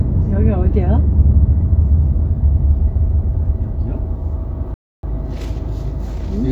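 A playback stall runs from 4.74 to 5.03 s: the sound cuts to silence mid-flow for about 290 ms, then resumes. The likely cause is the player running short of data, or its output thread being blocked, so nothing reached the output until it recovered.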